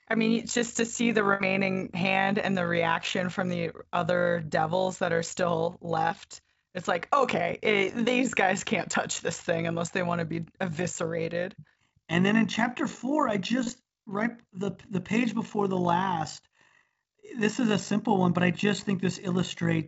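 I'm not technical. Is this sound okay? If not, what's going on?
No. All through the speech there is an overlap-add ripple: the level flutters up and down about fifty times a second, giving a rough, robotic buzz. Unlike call dropouts, the sound never cuts out. It wobbles steadily, because processed chunks were rejoined unevenly.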